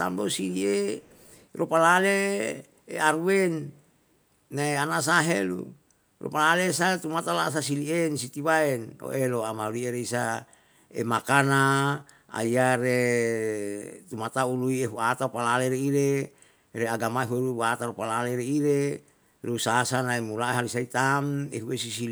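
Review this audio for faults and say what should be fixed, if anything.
An echo leak sits from 0.98 to 1.47 s: a faint copy of the speech returns about 0.38 s late, far below the direct signal. The likely cause is a loudspeaker at the far end whose echo canceller let some of its microphone pickup through and sent it back. A spectrogram shows weak harmonic traces repeating the speech pattern 0.38 s later, and the waveform shows only a slight low-level tail. Stronger echo cancellation at the loudspeaker end, or a headset there, would prevent it.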